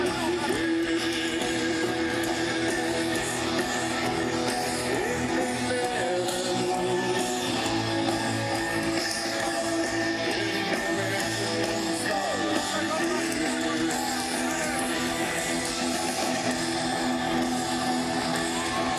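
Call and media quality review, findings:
No call or media quality faults found in this review.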